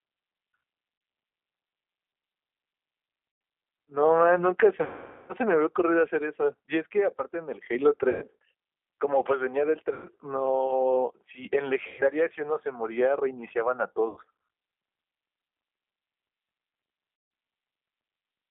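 The whole call runs through the G.729 codec at 8 kbit/s, which rebuilds the speech from a vocal-tract filter, a pitch predictor and a few pulses per frame. The line passes only about 250 Hz to 3.5 kHz, so the speech is thin and muffled, and the codec damage is plainly audible as a rough, synthetic texture throughout.

VoIP packet loss concealed by the speech codec then strikes eight times: 0.98 s (30 ms), 3.32 s (90 ms), 4.84 to 5.33 s (450 ms), 8.10 s (120 ms), 9.93 s (120 ms), 11.87 s (120 ms), 14.08 s (90 ms) and 17.16 s (150 ms). Each time the decoder keeps extending the last pitch and filter at falling gain, so the speech smears into a fading buzzy tone or coloured noise. The half-second gap near 5 s, which fits a run of about fifteen lost packets, decays furthest. The speech stays weak and distorted for a moment after each gap as the decoder recovers.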